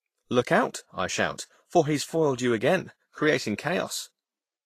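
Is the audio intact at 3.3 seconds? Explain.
No, at 3.3 s the speech carries Vorbis compression damage that runs through the whole clip. It's plainly audible: the treble is coarsely quantised into hiss and grain, consonants smear, and nothing sits above 14.2 kHz. That's likely a low-rate Vorbis encode, something like 34 kbps.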